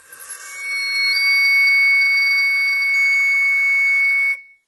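Across the whole music clip there is heavy HE-AAC compression damage, likely from a very low bitrate near 16 kbps. Nothing remains above 11.8 kHz. The treble is rebuilt from copied lower bands. Its harmonics don't line up.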